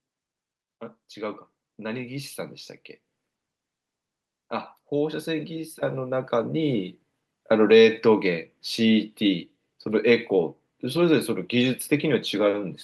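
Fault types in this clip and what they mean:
Automatic gain rising: the automatic gain control judged the incoming level too low and stepped its gain upward over roughly two seconds, from 4.89 s to 6.95 s, adding about 9 dB in total. Because the control acts on the whole signal rather than on the voice alone, the speech and the background noise behind it swell together, so the room seems to creep closer as the speaker grows gradually louder.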